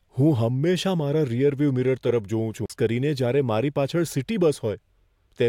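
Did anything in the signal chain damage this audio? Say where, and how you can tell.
Yes: a CD skip at playback, 2.66 to 2.70 s, after "રીઅરવ્યૂ મિરર તરફ જોઉં". The laser lost its track, muting about 40 ms, then resumed elsewhere before "કરીને જ્યારે મારી".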